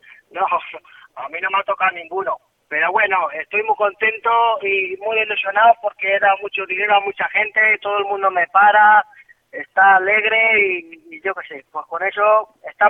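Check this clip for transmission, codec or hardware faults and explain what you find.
Listening closely turns up no transmission, codec or hardware faults anywhere in the clip. Nothing heard points to a problem in how the audio was sent, encoded or captured.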